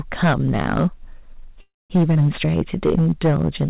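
Hard clipping runs through the whole clip: the speech is driven about 13 dB past the level the chain can pass, so roughly one sample in twenty is cut flat. That gives a harsh fuzz on every loud syllable rather than occasional crackle, and it sits on top of the narrow, telephone-like band that stops at 4 kHz, which fits a G.711 A-law call codec.

From 1.61 to 1.93 s there is a call audio freeze. The last sound trails on as a fading buzz or hiss, then about 200 ms of silence, and speech resumes exactly where it stopped, with nothing lost. That pattern points to a jitter buffer that likely ran dry while packets were held up, adding about 287 ms of delay.

At 2.14 to 2.18 s a skip ahead does the opposite. Roughly a tenth of a second of speech vanishes, and the two sides are joined through a tiny 11 ms bridge. Unlike the freeze, no pause is heard, only an abrupt jump that drops part of the sound.

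From 2.46 to 3.10 s a jitter buffer slow-down stretches the audio to 86% speed, adding 96 ms. The pitch stays the same while sounds are drawn out. This separates it from the freeze, because the sound never stops and instead plays continuously at a slower pace.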